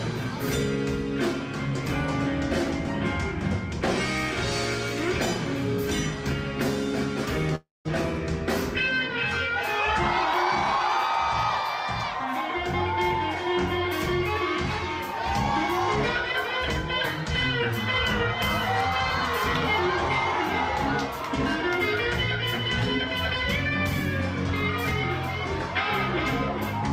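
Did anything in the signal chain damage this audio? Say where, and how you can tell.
Yes. A long network dropout at 7.55 to 7.87 s: the last sound smears into a fading buzz, then falls silent, as about 0.3 s of audio likely never arrived over the network.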